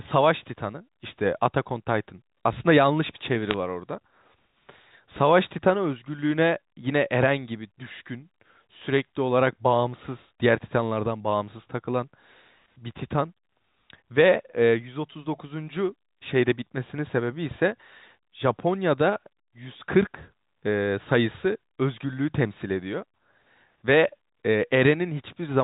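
Bit errors on a digital phone line at 3.47 to 3.54 s: a few flipped bits in the G.711 A-law stream corrupt single samples, producing a brief burst of sharp ticks and crackle.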